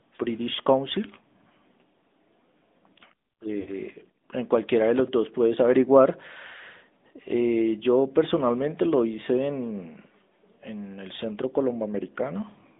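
Throughout, an AMR narrowband mobile codec, consistent with its 10.2 kbps mode, limits the speech to 200 Hz to 3.6 kHz, leaving it plainly buzzy and synthetic. From 3.60 to 3.72 s, lost AMR speech frames, fitting three dropped 20 ms frames, make the decoder repeat stale settings at falling gain, so the voice briefly smears and dips.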